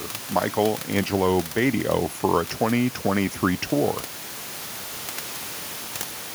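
No technical faults are present in this speech; the room noise sitting about 12 dB below it is part of the original recording.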